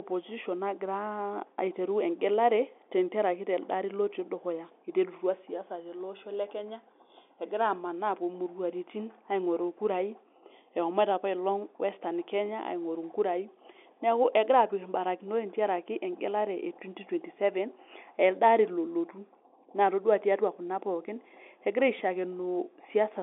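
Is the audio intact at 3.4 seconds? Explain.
Yes, the audio is intact at 3.4 seconds, carrying the band-limited sound of an ordinary telephone line with nothing breaking it at that moment.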